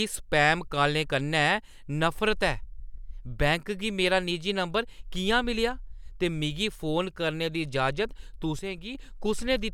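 From 8.59 to 8.95 s the speech abruptly sinks by about 6 dB for roughly a third of a second, then snaps back to full level. The likely cause is one channel dropping out, so the mono sum briefly carries only the remaining side.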